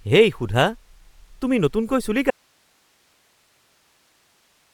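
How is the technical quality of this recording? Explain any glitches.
The technical quality is poor: the speech carries audible coding damage from start to finish, and the signal drops out partway through and never returns.

Throughout the clip there is a grainy, breathy edge on the speech, likely from Bluetooth LC3 compression. The transform codec, working in 10 ms frames at a rate that fits about 48 kbps, discards upper-band detail and fills it with noise. A spectrogram shows smeared, speckled texture in the highs, reaching to about 20.2 kHz.

At 2.31 s the speech cuts out abruptly, and only hiss remains, roughly 40 dB below the speech level, until the end. This is an audio dropout to a faint residue, likely a lost signal while the playback path stayed live. The waveform collapses to a thin noise floor.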